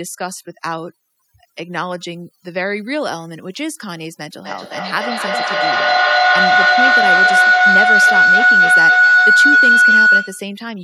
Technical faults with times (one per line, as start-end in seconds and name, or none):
0.00-10.83 overdone noise removal
4.44-10.58 feedback howl